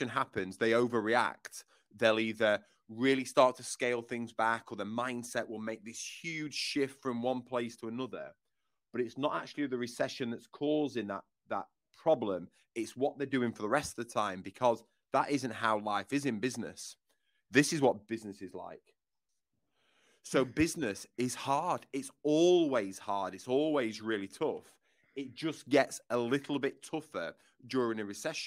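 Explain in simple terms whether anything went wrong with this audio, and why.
Nothing went wrong: the speech recording has no technical faults at any point.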